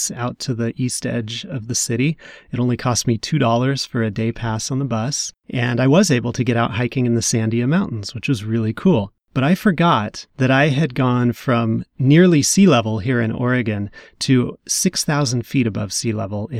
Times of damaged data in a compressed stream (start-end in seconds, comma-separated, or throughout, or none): none